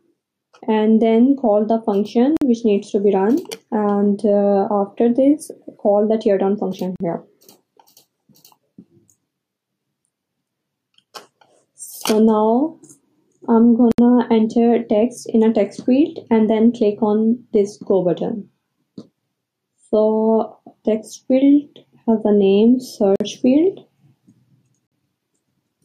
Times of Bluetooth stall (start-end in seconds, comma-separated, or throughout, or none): 2.37-2.41, 6.96-7.00, 13.92-13.99, 23.16-23.20, 24.87-24.92